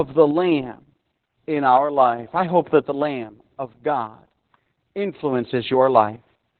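From start to finish the speech carries heavy Opus voice compression: the band stops dead around 4.3 kHz, so it sounds muffled and phone-like, and the coarsely coded excitation adds a hoarse, slightly robotic edge. That narrowband SILK-style sound points to a very low bitrate, around 8 kbps.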